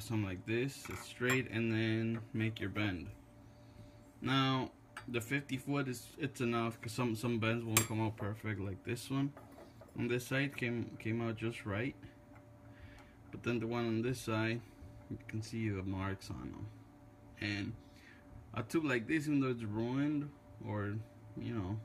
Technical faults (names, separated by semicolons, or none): none